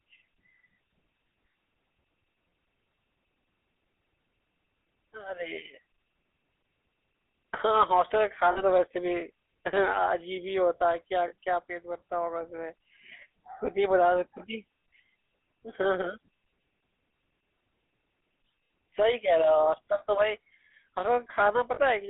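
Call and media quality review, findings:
GSM full-rate codec throughout. Buzzy, gravelly roughness on speech. Band limited to roughly 250 Hz to 3.7 kHz. Regular-pulse excitation with decimated residual, consistent with 13 kbps GSM full rate. Plainly audible codec damage across entire call.

Lost GSM frames at 8.52 s, 11.28 s, 21.74 s. Each a brief, roughly 40 ms rough metallic ring where the decoder repeats the last good frame, which fits two consecutive 20 ms frames dropped. Too short to fade to silence. Probable component: radio link or transport feeding the GSM decoder, with concealment masking each gap.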